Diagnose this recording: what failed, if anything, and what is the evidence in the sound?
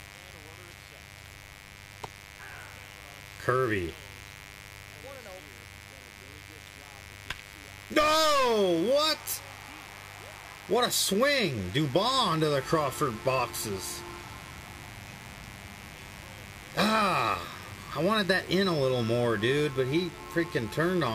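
The analogue wiring let in mains buzz: a raspy 50 Hz buzz runs through the whole recording, sitting about 20 dB under the signal. Sharp switching spikes from a dimmer, rectifier or poor shielding, twice per cycle, spray harmonics up into the kilohertz range.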